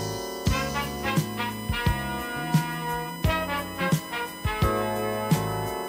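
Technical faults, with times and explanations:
Throughout: USB whine, a steady tone fixed at 1 kHz that sits roughly 15 dB below the programme and stays audible under it from start to finish. The pitch points to the USB bus's 1 ms frame timing: the interface draws current in bursts once per frame, and that periodic load couples into the audio path through the shared power or ground. The result is a constant whine that does not follow the programme.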